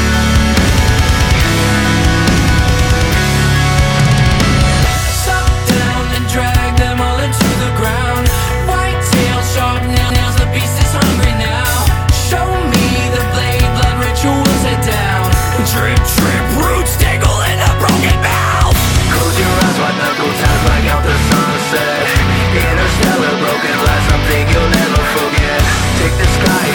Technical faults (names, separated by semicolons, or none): repeated frames